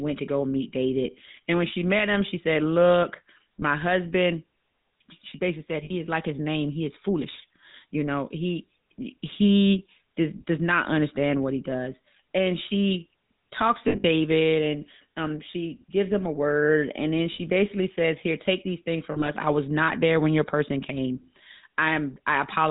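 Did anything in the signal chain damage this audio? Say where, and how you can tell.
Yes, at the codec stage. The whole clip carries the buzzy, gravelly roughness of the GSM full-rate codec, plainly audible throughout, with nothing left above 4 kHz. That sound fits the old 13 kbps GSM full-rate scheme, which models the vocal tract and drives it with a sparse, regularly spaced pulse excitation, only every third sample. That coarse excitation is where the grit in the speech comes from.

The network stage adds lost GSM frames on top. Listen for a short metallic, ringing hold where the decoder repeats the last good frame: 3.60 to 3.63 s (about 20 ms, one frame's worth), 5.84 to 5.91 s (60 ms), 13.88 to 14.05 s just after "she talks" (140 ms scattered over 160 ms, longest run about 70 ms), 17.32 to 17.40 s just before "basically says" (60 ms), and 19.12 to 19.29 s between "take these things" and "I was not there" (80 ms in patches).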